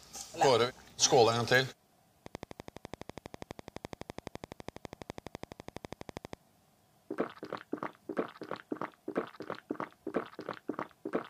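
A steady ticking runs over the sound from 2.26 to 6.34 s, about twelve sharp, near-identical clicks per second at an even pace, roughly fifty in all, standing well above the audio. This train of clicks is likely interference from nearby equipment or a faulty connection or power supply.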